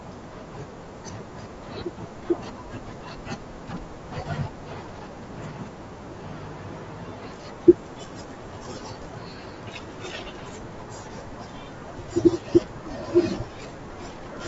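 Throughout, the speech is rough and grainy, likely low-delay AAC compression at roughly 32 kbps; a spectrogram shows blurred harmonics with noise filling the gaps.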